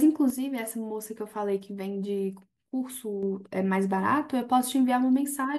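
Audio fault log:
0.30–3.23 s, sudden gain jump: the digital gain was likely stepped down by about 6 dB from one sample to the next with no ramp, as when a level setting or bit shift takes effect instantly, then stepped back up at 3.23 s. The speech and the background noise beneath it drop together at 0.30 s and rise together at 3.23 s, so the level changes abruptly rather than the speech itself getting quieter.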